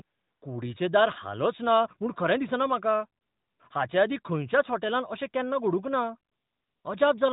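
AMR comfort noise fills three pauses in the speech: 0.02 to 0.42 s, just before "कुडीचें दार"; 3.22 to 3.60 s, ahead of "हाचे आदीं खंयच्याच होटॅलांत"; and 6.32 to 6.84 s. Each time the phone judged the talker silent and stopped sending speech frames, so the receiver substituted a smooth synthetic hiss for the real background. On a spectrogram these gaps show as flat, featureless noise that starts and stops abruptly. The band-limited narrowband channel, with light codec colouring, sounds consistent with the 12.2 kbps AMR mode.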